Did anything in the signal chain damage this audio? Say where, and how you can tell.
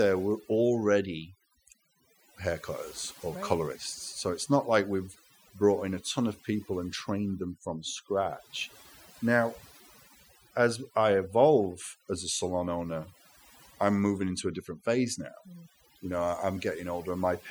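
Yes, there's overdone noise removal in the processing stage, and it runs the whole way through. Between phrases the background drops to near silence with little twinkling specks. That's a noise reducer pushed too hard: any frequency band sitting close to its noise estimate gets pulled way down or shut off, so the quieter parts of the speech get cut along with the noise.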